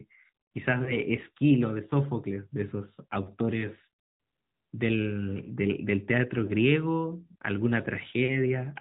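Speech passed through the AMR narrowband mobile codec, which resamples it to 8 kHz and rebuilds each 20 ms frame from a vocal tract model driven by sparse pulses. Throughout, nothing above 4 kHz survives, and the plainly audible buzzy, synthetic texture points to a mid-rate mode of about 10 kbps. Lost AMR speech frames occur at 0.84 to 0.97 s and 6.46 to 6.52 s, each a single 20 ms frame that failed its check. The decoder repeated the previous pitch and vocal tract settings at reduced gain, heard as a brief dip or warble before the voice returns.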